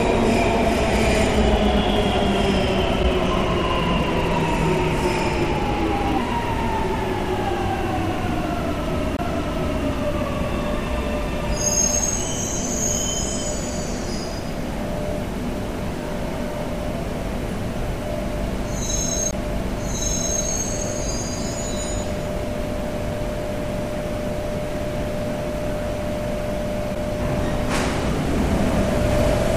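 A recording of everyday sound has two kinds of fault. Three short disruptions, each about 30 ms long, come at 3.02 to 3.05 s, 22.02 to 22.05 s and 26.94 to 26.97 s. In each, the sound jumps ahead and the next stretch comes out as a chirp, a burst of noise or a brief hole. This is likely a broken MP3 bit reservoir. Frames were lost, and the frames after them looked back for borrowed data and found bytes of another frame. The frame length of about 26.1 ms fits standard MP3 framing. There are also three CD skips: a tick or tiny gap at 6.18 s with a mute of only a few milliseconds, and mutes of about 20 ms at 9.17 to 9.19 s and 19.31 to 19.33 s. After each, the audio resumes from a different point. A knock or disc flaw made the laser jump to another turn of the spiral, so the player briefly muted and continued one or more turns forward or back.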